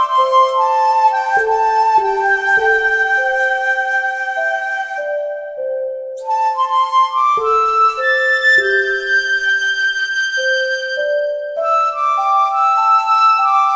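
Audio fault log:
No faults heard anywhere in this recording.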